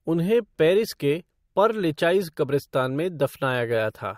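No technical faults can be heard anywhere in the speech.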